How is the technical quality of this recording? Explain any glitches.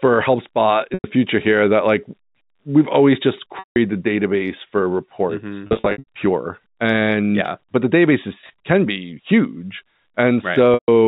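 The speech carries five brief dropouts, each a held, buzzy smear where the sound briefly freezes on one pitch before the talker resumes. These are packet loss with pitch repetition, heard at 0.94 to 1.04 s just before "future here that like", at 3.59 to 3.76 s between "we've always just" and "the database for", at 5.67 to 6.04 s, at 8.41 to 8.50 s between "yeah but the" and "can be huge", and at 10.74 to 10.88 s.

In each case stretches of the stream failed to arrive, and the receiver filled the hole by looping the last pitch period it had, so the tone holds briefly and fades out over about 50 ms. The gaps run about 100 ms, 170 ms and 140 ms at the first, second and fifth points, long enough that the held pitch fades into silence before the speech returns with a short cross-fade. The third gap is 280 ms in total, spread across 400 ms in runs no longer than 80 ms, which makes a string of short, slightly held, buzzy notes. 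The fourth is 110 ms spread across 220 ms in runs of 20 ms or less, so it is heard as brief, slightly held, buzzy notes. The G.711 A-law telephone coding shows its usual 4 kHz ceiling and adds at most faint quantisation noise of its own.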